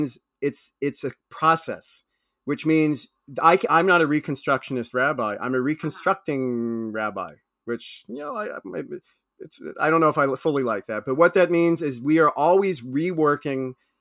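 Nothing in this recording stood out as a technical problem on listening.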